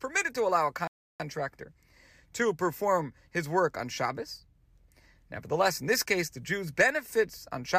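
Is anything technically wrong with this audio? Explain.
Yes, the speech stops dead for a moment partway through. A rebuffering stall begins at 0.87 s, right after "to allow a", and lasts until 1.20 s. The player ran out of downloaded audio, so it fell silent for about 0.32 s and then continued from the exact point where it paused. Nothing is skipped. Time is simply inserted. On a waveform this shows as a flat line between those times, and on a spectrogram as a blank vertical band with the speech picking up unchanged on the far side.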